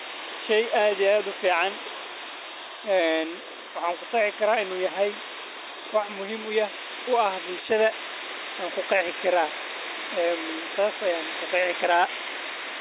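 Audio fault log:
The speech signal holds steady across the whole recording with no audible technical faults.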